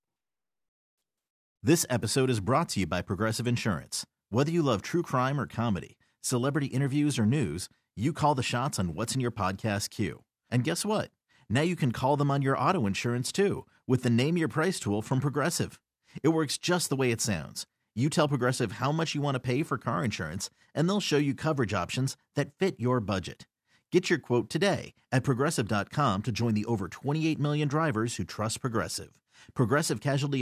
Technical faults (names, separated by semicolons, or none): none